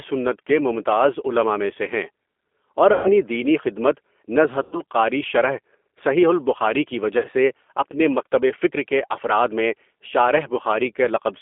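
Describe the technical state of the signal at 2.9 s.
Right at 2.9 s you hit VoIP packet loss concealed by the speech codec, running from 2.93 to 3.13 s. About 120 ms of audio never arrived, so the decoder kept extrapolating its last pitch and filter with falling gain. You hear the sound smeared into a buzzy tone or coloured noise that fades out, and the voice stays weak or distorted for tens of milliseconds into "دینی خدمت".

Underneath that, the whole line is G.729 coded at 8 kbit/s, band-limited to roughly 250 Hz to 3.4 kHz. The codec rebuilds the sound from a vocal tract filter, a pitch predictor and a few pulses per subframe, so the speech comes across plainly rough and a bit synthetic.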